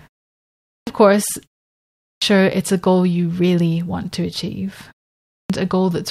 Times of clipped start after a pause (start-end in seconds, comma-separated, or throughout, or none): 0.64-0.87, 1.95-2.22, 5.23-5.50